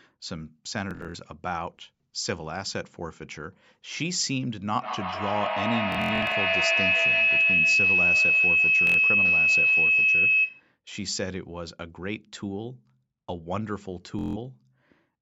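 Bluetooth stutter first appears from 0.91 to 1.16 s. Audio packets arrived late or not at all, so the receiver replayed its last short buffer. About 160 ms goes missing across 232 ms, heard as a rapid buzzing repeat before the sound jumps ahead.

Feedback howl builds from 4.74 to 10.72 s. A second device in the room feeds the loudspeaker back into the microphone, and each pass gains level. The loop narrows to a tone near 3 kHz, pulsing roughly every 150 ms and peaking about 8 dB above the speech.

Under the howl, further Bluetooth stutter occurs from 5.92 to 6.36 s, the worst burst, with about 255 ms lost and a 93 ms run of machine-gun repeats. Another short stutter follows from 8.87 to 8.98 s, about 93 ms lost. A final one runs from 14.19 to 14.37 s, about 160 ms lost.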